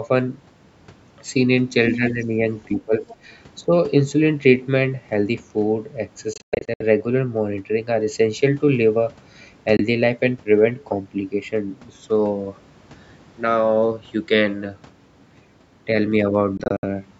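Between 1.91 and 2.25 s, the echo canceller likely failed to remove the far end's loudspeaker sound from the microphone, so the other side's voice leaks through, about 10 dB below the talker. A fainter scrap returns from 3.09 to 3.15 s, roughly 25 dB down. It sounds like a second voice sitting behind the main one.

Overlapping that first leak, from 1.97 to 2.39 s, both sides talk at once. Unable to separate the talker from the echo, the canceller likely pulled down everything, and the talker's speech is suppressed in double talk. It dips by about 10 dB. It ducks again from 2.68 to 3.07 s, by about 15 dB, and briefly from 3.63 to 3.71 s. The voice sounds pushed back while the far side speaks.

Later, the wireless link to the headphones likely misses its deadlines, and what follows is a Bluetooth dropout pattern. From 6.33 to 6.82 s, about 280 ms of audio goes missing in scattered gaps, the longest near 110 ms. 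A single 21 ms hole falls at 9.77 s. From 16.57 to 16.84 s, about 130 ms is lost in pieces, the longest about 64 ms. Each gap cuts to silence, and the sound resumes further along, as though it kept playing unheard.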